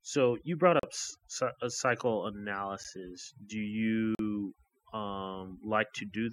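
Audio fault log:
Throughout: overdone noise removal. The background between phrases drops and breaks up into twinkling specks. A noise reducer set too hard pushes each frequency band down whenever it sits close to its noise estimate. Bands that hover near that line flicker on and off, and those flickers are the specks. Soft, low-level parts of the speech fall under the same threshold and are cut away.
0.80–0.83 s, 2.84 s, 4.15–4.19 s: block of digital silence. The sound drops out and returns with no fade. The first hole lasts about 37 ms. The second lasts about 11 ms and is heard as a tick. Its length fits a 512-sample buffer. The third lasts about 43 ms, which fits a 2048-sample buffer. Both of those point to output blocks that were not filled in time.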